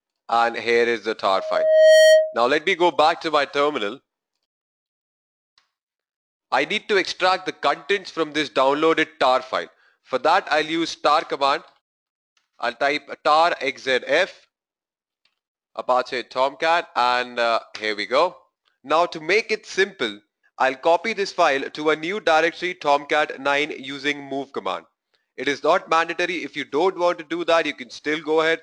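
A single tone at 630 Hz swells out of the audio from 1.36 s, takes roughly 0.7 s to reach its peak about 10 dB above the surrounding sound, and cuts off at 2.37 s. This is loudspeaker feedback squeal: the microphone was picking up its own loudspeaker, and at 630 Hz the loop gain exceeded one.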